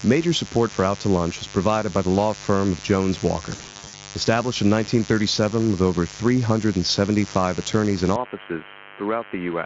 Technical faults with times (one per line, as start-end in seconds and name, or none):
0.00-9.66 mains buzz
3.49-3.95 VoIP packet loss concealed by the speech codec
8.16-9.66 input switched to a poorer device